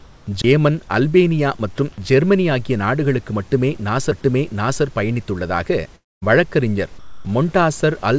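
From 5.96 to 6.24 s the speech turns into a fading buzz, then silence, with about a quarter second lost: likely a long network dropout, distinguished by that decaying continuation.

From 6.99 to 7.25 s, just after "பயணித்துள்ளதாக வழக்கறிஞர்", the sound gives way to steady, even noise, losing about 140 ms of sound: likely sound dropped by the voice detector, not a fading buzz.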